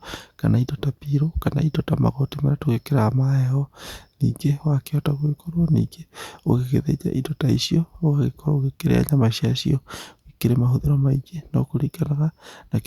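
No technical faults can be heard anywhere in the speech recording, so there is nothing to place in time or explain.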